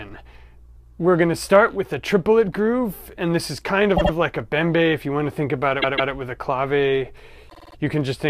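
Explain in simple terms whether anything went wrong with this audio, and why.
The audio stutters three times, replaying a short slice: at 3.96 s a 78 ms piece plays twice more, at 5.81 s a 157 ms piece twice more, and at 7.49 s a 52 ms piece five more times. These are repeated frames. Chunks of the compressed file were stored or sent more than once, so the player repeats them and the clip grows longer.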